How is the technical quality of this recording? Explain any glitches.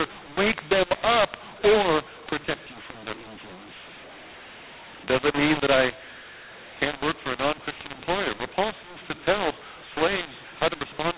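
Quality is poor, with one fault present the whole way through. Throughout, mu-law and A-law are mixed up: A-law telephone coding is decoded as mu-law. Levels scramble, making the speech harsh and distorted, with noise filling pauses. The narrow telephone band at 8 kHz sampling, cut off at 4 kHz, is heard too.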